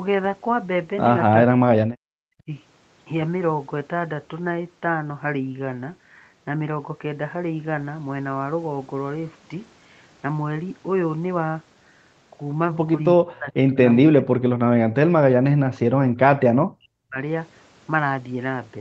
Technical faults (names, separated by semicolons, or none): speech suppressed in double talk